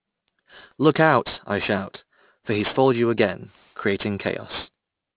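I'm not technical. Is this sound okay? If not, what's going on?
No, the speech has aliasing throughout: it was squashed to a lower quality without filtering first, so hiss sounds above 4 kHz fold back as gritty, metallic noise.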